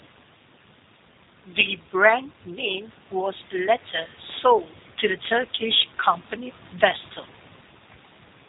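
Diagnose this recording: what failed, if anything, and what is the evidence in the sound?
The failure sits at the codec stage. The whole recording passes through a G.729 codec, and the damage is plainly audible from start to finish. The band stops at about 3.8 kHz, so sibilants and upper detail are gone. The speech sounds rough and slightly synthetic. The codec rebuilds each short frame from a vocal tract filter, a pitch predictor and a few pulses, and the coarse pulses leave that roughness. The sound fits an 8 kbit/s stream.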